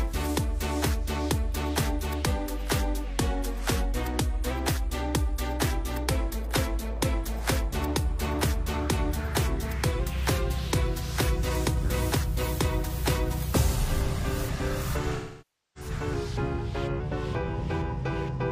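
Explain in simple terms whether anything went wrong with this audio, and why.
Three times the sound suddenly changes speed and pitch together, then snaps back. From 3.09 to 4.50 s it runs 6.3% slow and drops about a semitone. From 10.00 to 10.67 s it runs 6.3% fast and rises about a semitone. From 16.13 to 17.00 s it drops again. The likely cause is a drift correction step, where software keeping two clocks in line abruptly changed the playback rate.

From 15.16 to 15.90 s, about 0.6 s of sound is missing. This is AAC frame loss with concealment. Chunks of the compressed audio never arrived. The decoder covered the hole by rebuilding sound from the last good piece.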